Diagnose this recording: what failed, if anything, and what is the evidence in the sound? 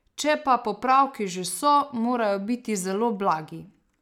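No stage of the chain shows a failure: the speech signal holds steady level and continuity, with nothing in the sound pointing to trouble in the wiring, conversion, buffering, processing, transmission, storage or playback.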